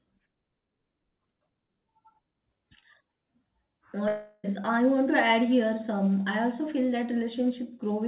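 From 4.08 to 4.46 s the speech gives way to a fading buzz that carries on from the last sound, then resumes further on with that stretch lost: a long network dropout, likely packets that never arrived, concealed across the gap. Throughout, nothing sounds above 4 kHz, consistent with a G.711 call codec.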